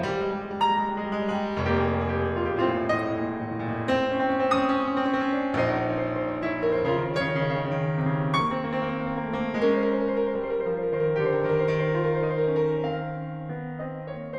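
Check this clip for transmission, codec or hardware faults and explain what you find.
One fault turns up in this music clip, a brief burst of damaged data in the compressed stream.

Damaged data in a compressed stream, from about 2.97 to 2.99 s (roughly 27 ms). Part of the encoded bitstream there is corrupt, so the decoder misreads those frames, loses sync and hunts for the next valid frame header before normal playback resumes. It sounds like a short chirp, squawk, click or brief hole cutting across the music.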